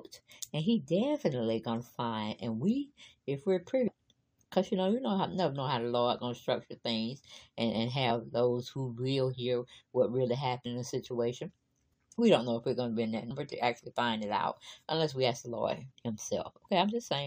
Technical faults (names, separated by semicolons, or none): damaged data in a compressed stream